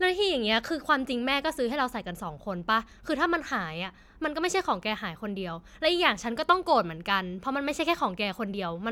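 Nothing in this speech recording goes wrong technically; there's simply nothing here to flag.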